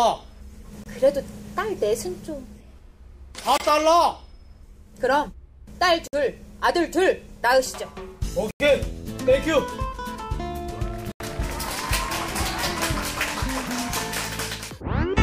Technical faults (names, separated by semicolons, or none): block of digital silence